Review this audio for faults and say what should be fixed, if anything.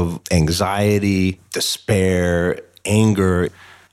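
Nothing here needs fixing; I listened to the speech all the way and didn't catch any technical faults.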